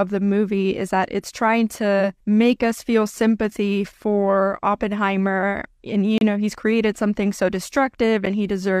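At 6.18 to 6.21 s, just before "know he's created something", and again at 8.26 s, a gap between stream segments inserts silence of about 32 ms and 9.5 ms where 2 s segments' timestamps fail to meet. Each is a hard-edged dropout, a flat waveform line and a blank vertical stripe on a spectrogram.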